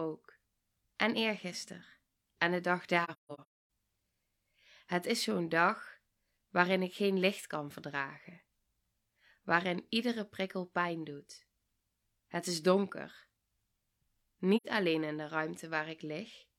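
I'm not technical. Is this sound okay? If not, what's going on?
No. AAC frame loss with muting happens at 3.04 to 3.58 s, just after "de dag", and again at 14.56 to 14.66 s, just before "alleen in de". Chunks of the compressed audio went missing, and the player filled them with silence, fading out and back in instead of cutting sharply. The first spot is a cluster of gaps adding up to about half a second, the longest around a third of a second. The second is a brief loss of two chunks, 85 ms in all.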